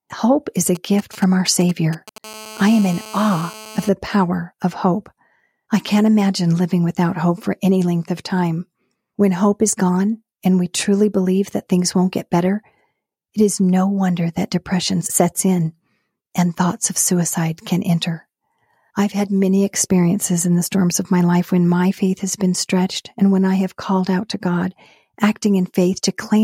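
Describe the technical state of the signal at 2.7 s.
At 2.7 s the speech carries GSM phone buzz, running from 2.24 s to 3.89 s. A nearby 2G phone on a call transmits in bursts 217 times a second, and the audio circuitry rectifies those radio pulses into a hard, raspy buzz about 18 dB below the speech. Unlike mains hum, whose smooth tone sits at 50 or 60 Hz, this buzz is harsh, harmonic-rich and holds steady throughout, independent of the speech.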